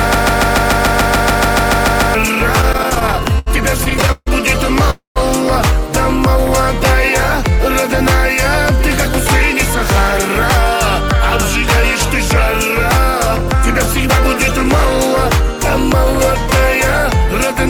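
From the very start until 2.15 s the audio is caught in a broken-record loop. A fragment of about 144 ms repeats exactly, 14 times back to back, and was already looping when the clip begins. The player or stream likely stalled and kept resending its last buffer, so the audio that belonged there is lost.

Between 2.61 s and 4.28 s come repeated stalls (stutter). The jitter buffer ran dry 21 times, with gaps up to 147 ms long. The receiver stretched the preceding sound across 410 ms in total, about a quarter of the span. Nothing is dropped, but the audio drags and stutters.

At 4.90 to 5.18 s there is a call audio freeze, likely from packets held up in transit. The last sound is extended as a fading buzz or hiss that falls to silence for about 130 ms, then the audio resumes where it stopped, pushed 253 ms later.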